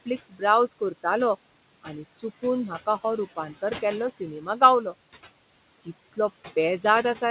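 A noise suppressor runs on this speech recording throughout, pulling down every band it judges to be steady background by about 18 dB, frame by frame. The room noise therefore dips in the gaps between phrases and swells back up beneath the speech. The voice is heard within a bandwidth that stops near 4 kHz, as expected from a narrowband telephone codec. Right at the start, between 0.06 and 0.42 s, the suppressor also mistakes part of the speech for noise. This is speech cut by the noise suppressor: in short stretches adding up to about a tenth of a second, quiet sounds are dragged down with the background by as much as about 13 dB. The opening therefore sounds swallowed and faint.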